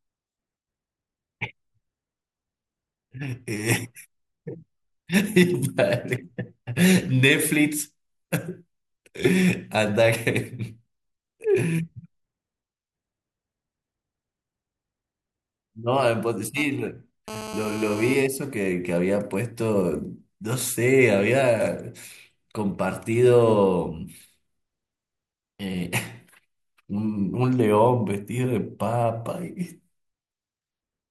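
Speech, interrupted from 16.57 to 18.14 s by a GSM phone buzz: a raspy 217 Hz burst at about 12 dB below the speech from a nearby phone transferring data, showing as evenly spaced harmonic lines on a spectrogram.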